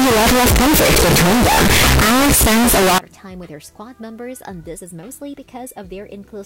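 From the start to about 2.98 s there's a brutal, harsh distortion where even the quiet bits come out as loud as everything else, which is most likely signed and unsigned mixed up. Flipping the top bit of these 8-bit samples turns each zero crossing into a full-range jump.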